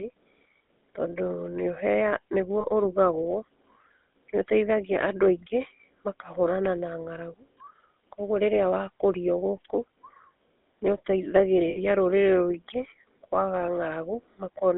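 A buzzy, gravelly roughness runs through the whole clip, with the speech confined to a narrow line band of roughly 250 Hz to 3.6 kHz. This is plainly audible GSM full-rate codec damage, consistent with the 13 kbps first-generation GSM coder. That coder rebuilds speech from a vocal-tract model driven by coarse, regularly spaced pulses, which gives the voice its grainy edge.

At 2.6 s the sound briefly freezes into a rough, metallic ring for about 0.06 s. These are lost GSM frames, and the gap fits two missing 20 ms frames. The decoder bridges the gap by repeating the last good frame's settings, so the sound is held and buzzy where the speech should move on.

The same metallic hold returns at 11.7 s and lasts about 0.08 s. This longer dropout is again lost GSM frames, matching three missing frames. The concealment stretches the previous sound across the hole.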